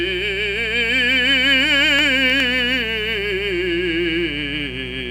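A steady, raspy buzz sits under the music from start to finish, roughly 15 dB below it: mains buzz, with sharp switching spikes on the 60 Hz supply leaking in.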